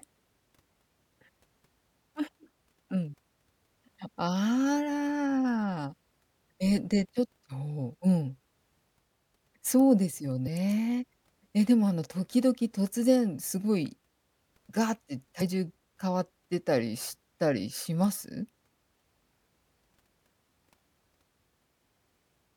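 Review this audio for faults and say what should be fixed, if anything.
Damaged data in a compressed stream occurs twice in this speech clip, at 10.44 to 10.48 s and again at 15.37 to 15.42 s, each burst lasting about 44 ms. In both places a short stretch of the encoded file is corrupt, so the decoder misreads those frames, loses its lock on the frame structure and hunts for the next valid header, producing a brief blip before the speech carries on. Re-fetch or re-encode from a clean source and verify the file with checksums during transfer and storage.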